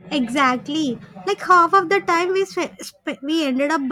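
A speech recording in which a gain stage is driven about 2 dB past its limit from 1.51 to 1.78 s, causing hard clipping: flattened peaks that add a brief crackle.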